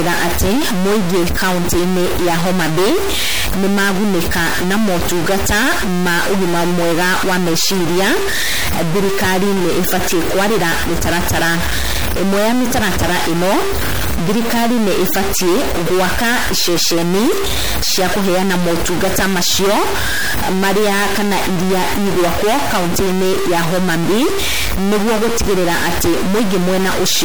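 A stuck bit, likely from a broken data line or converter, holds one bit fixed throughout this speech, filling pauses with noise. MP3 compression, likely at a rate that fits a 64 kbps encode, leaves plainly audible watery, swirly artefacts and smeared attacks, with nothing above 21 kHz.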